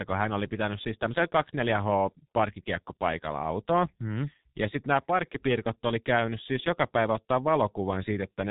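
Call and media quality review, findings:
G.723.1 codec across the whole clip: low-rate telephony encode, heavy damage, consistent with roughly 6.3 kbit/s. Band cut at 3.8 kHz and 30 ms frames with a sluggish voice model leave speech muffled and hoarse, consonants smeared.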